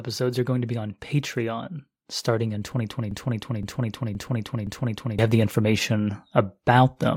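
From 2.25 s the level starts creeping up, and it keeps climbing until about 6.97 s, ending roughly 7 dB louder. That's automatic gain rising: the gain control decided the input was too quiet and slowly turned itself up. Because it's boosting the whole signal, the voice and the background noise swell together rather than the speech just getting clearer.

Partway through that rise, from 3.11 s to 5.19 s, there's a broken-record loop. A chunk about 0.52 s long plays four times back to back, exactly the same each time, so it sounds like a stuck skip. Whatever should have been heard in those two seconds is simply gone. The likely cause is a player, encoder or stream stalling and repeating the last fragment it had buffered.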